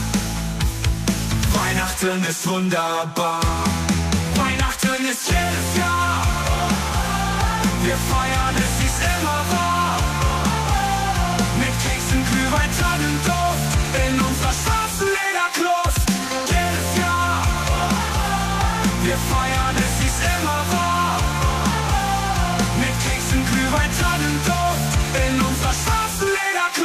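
No technical faults can be heard anywhere in this audio. Nothing in it calls for a timestamp or a repair.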